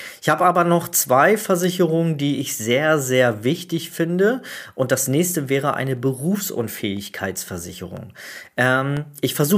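A speech clip with periodic USB or driver dropouts. Just after "das nächste wäre eine", from 5.97 to 8.97 s, about seven ticks fall every 0.5 s. Each is a sub-millisecond gap of silence.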